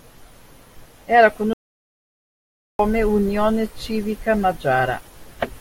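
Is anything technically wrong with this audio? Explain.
Yes, there's an audio dropout to silence running from about 1.53 s to 2.79 s, so roughly 1.26 s of the speech is simply missing. The speech cuts off mid-flow and comes back just as abruptly, and in between there's dead silence with no room tone at all. That points to the input likely being lost for a moment, from a disconnect, a link failure or an accidental mute, while the recorder kept writing silence.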